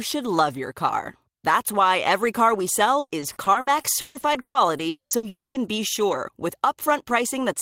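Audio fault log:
2.99–5.57 s, repeated packet loss (robotic sound): the speech turns choppy, with a dozen or so short holes, the longest about 140 ms. Each hole is bridged by stretching the preceding sound, so roughly a quarter of this span is patched rather than real.
4.89–5.14 s and 5.29–5.58 s, long network dropout: each starts as a fading buzz carried over from the last sound, then goes quiet for about 0.13 s and 0.19 s before speech resumes with material missing. The likely cause is audio arriving too late to be played.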